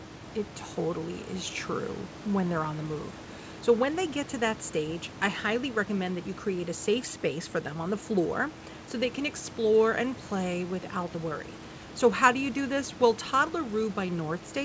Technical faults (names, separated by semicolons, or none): none